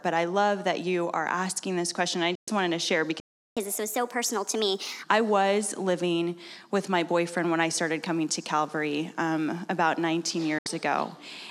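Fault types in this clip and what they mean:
Digital broadcast dropout: the receiver lost valid frames and muted, so the sound fades out within about 3 ms and vanishes from 2.35 to 2.48 s and from 10.58 to 10.66 s. The waveform shows flat gaps, and the spectrogram shows blank vertical strips across all frequencies.
Playback stall: the audio stops mid-flow at 3.2 s and stays silent for about 0.37 s, until 3.57 s, likely because the player ran out of data or its thread was blocked. The waveform flatlines, and the spectrogram shows an empty full-band gap.
Catch-up at higher speed: from 3.57 to 5.03 s the player works through its backlog at 1.25 times normal speed, raising pitch by about four semitones before settling back. On the spectrogram, harmonics shift upward and events crowd together, and the waveform looks squeezed in time.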